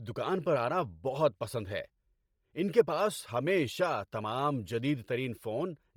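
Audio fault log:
Throughout: Bluetooth LC3 compression. The speech has a breathy, grainy edge across the whole clip, and the damage is heavy. The upper spectrum sounds thin and hissy, with noise standing in for real high-frequency detail. The cause is likely a low-bitrate LC3 encode, which fits about 32 kbps with 10 ms frames. At a rate that low, the codec discards much of the top band and fills the gaps with noise.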